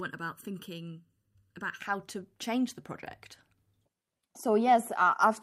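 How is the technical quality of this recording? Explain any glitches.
The opening of the speech sounds hollow and phasey. From 0.0 to 1.81 s there is channel delay (comb filtering): one channel runs under a millisecond late, so the mono sum cancels at evenly spaced notches starting around 700 Hz.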